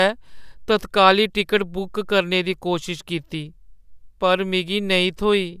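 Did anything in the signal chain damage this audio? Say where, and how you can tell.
No, nothing in this speech recording stood out on listening as damage from any stage of the signal chain.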